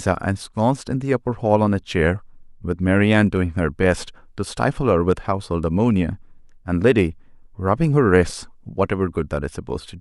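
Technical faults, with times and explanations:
No technical faults are audible in this speech recording.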